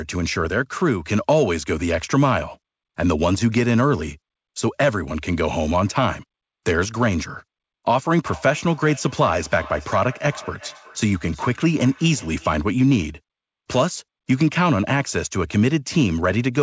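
From 8.22 to 12.69 s, feedback echo between two devices: playback re-enters a microphone, so speech repeats roughly every 0.4 s, about 20 dB down, showing as evenly spaced spectrogram copies.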